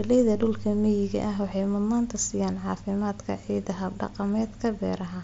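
At 4.07 s, just after "siiyaan caafimaadka ciidda", there is a barely noticeable, smoothed-over catch in the speech. This is concealed Bluetooth headset packet loss: one packet of about 7.5 ms on the mSBC headset link went missing, and the receiver patched the gap by repeating a matching stretch of the preceding waveform.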